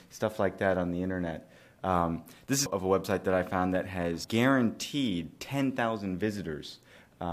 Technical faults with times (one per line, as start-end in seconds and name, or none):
2.65 damaged data in a compressed stream
4.23 damaged data in a compressed stream